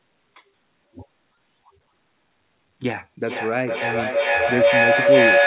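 Speech carried over a narrowband call link, with nothing above 4 kHz, which points to a telephone-grade codec such as G.711. From 3.26 s to the end, a feedback howl builds: a second device in the same room feeds the loudspeaker back into the microphone, and each trip round the loop adds level, so the sound collapses into a tone near 500 Hz that peaks about 9 dB above the speech and pulses roughly every 400 ms. On a spectrogram this shows as a bright horizontal band near 500 Hz that brightens over time, and the waveform envelope swells in regular beats.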